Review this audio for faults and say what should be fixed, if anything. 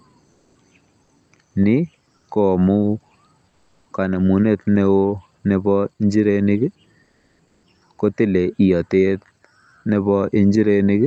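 Transmission likely paused in quiet gaps (Opus DTX), so comfort noise in place of the background fills 0.31–0.55, 3.49–3.85 and 7.03–7.63 s: flat, featureless hiss about 2 dB quieter. Disabling DTX on the sending side, or fine-tuning the receiver's noise generation, would keep the real background continuous.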